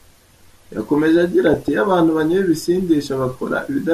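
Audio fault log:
Throughout: MP2 compression. The speech sounds dull and plainly gurgly and granular, which is likely a low-rate MPEG Layer II stream, something around 80 kbps. At that rate the encoder can't afford to keep all 32 sub-bands going, so the top ones drop out or flicker in and out. The bands it does keep are quantised coarsely, and that's where the granular texture comes from.
1.47–1.68 s and 3.07–3.26 s: DAB burbling. For about a fifth of a second each time, there's a burbling sitting over the speech. The sound points to weak reception: bit errors, roughly a few tenths of a percent, slipped past the error correction into the audio data. Corrupted samples then put short blips of noise into single sub-bands, and corrupted scale factors make sub-bands leap in level for up to a frame, and a run of those frames in a row gives the burbling.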